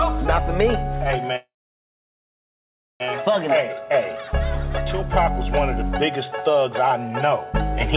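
From 1.36 to 3.02 s there is a call audio freeze: a brief fading buzz, then about 1.5 s of silence, after which the sound resumes where it stopped, now running 1.64 s later. The likely cause is stalled packets emptying the jitter buffer. The band-limited sound, with nothing above 4 kHz, fits a narrowband call codec.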